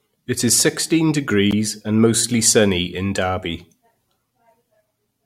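A speech clip with one gap between stream segments at 1.51 s, right after "is sixteen": about 15 ms of hard-edged silence where two segment timestamps don't quite meet, with no audio lost.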